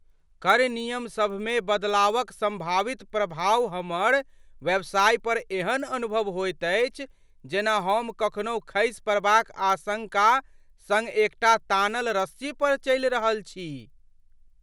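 Throughout the speech, a resampler restarted on every block leaves a small error at each 100 ms block edge, where the converter, which fits a 24 kHz to 48 kHz conversion, lacked its neighbouring samples. The result is a steady 10 Hz ticking under the speech, showing as faint vertical lines every 0.1 s on a spectrogram and tiny kinks in the waveform.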